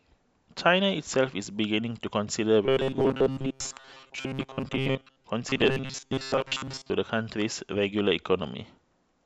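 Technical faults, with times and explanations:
2.66 to 5.25 s and 5.50 to 6.91 s, robotic sound from repeated short buffers: the speech turns into a stiff, metallic buzz locked at a fixed pitch of 133 Hz, still loosely tracking the words. This is likely caused by new audio arriving too slowly, so the playback loops a tiny slice of about 7.5 ms over and over, and most of the real signal in these stretches is skipped.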